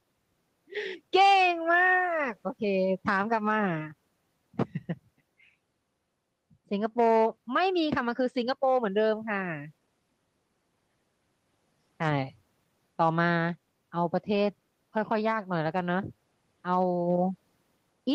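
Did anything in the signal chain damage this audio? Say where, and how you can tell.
No, nothing in the chain.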